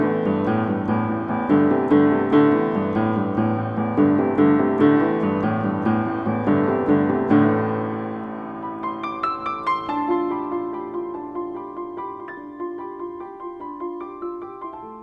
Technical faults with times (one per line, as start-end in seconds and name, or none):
none